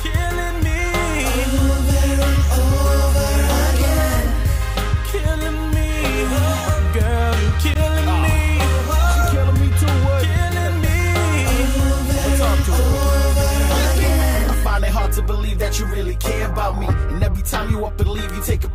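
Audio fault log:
0.26–18.29 s word clock ticks: an unlocked receiving clock slips one sample about every 0.7 s, giving some thirty sharp ticks, which fits roughly 30 ppm clock error.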